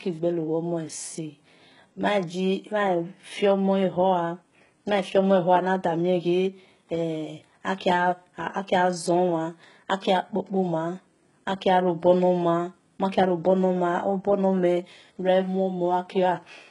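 Speech clip with heavy HE-AAC compression throughout. Nothing sounds above about 11.1 kHz. The treble is likely rebuilt by band replication, so s sounds turn gritty and lispy, which fits a very low bitrate near 12 kbps.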